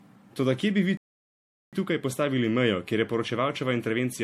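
Throughout, generation loss, likely from roughly seven rounds of MP3 re-encoding near 70 kbit/s, leaves the speech swirly and hollow, with smeared attacks. At 0.97 s the player likely ran out of data, and this playback stall silences the speech for 0.76 s before it resumes at 1.73 s.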